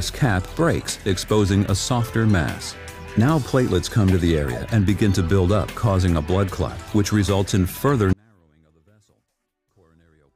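From 8.13 s to the end, an audio dropout to a faint residue about 40 dB down cuts abruptly, unlike a fade, likely from a lost signal.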